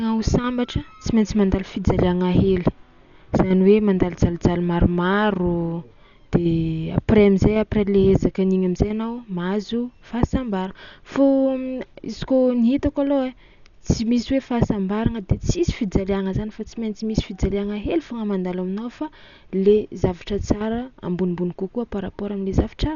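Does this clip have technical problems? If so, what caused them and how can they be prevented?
Yes. Throughout the speech the sound is dull, with nothing above 6.9 kHz, and a rough, fluttering noise surrounds tonal sounds. This is likely heavy Dolby Digital compression at a bitrate near 48 kbps. The encoder narrowed the band and left many frequency lines without mantissa bits, so the decoder filled them with dither noise. Encoding at a higher bitrate prevents it.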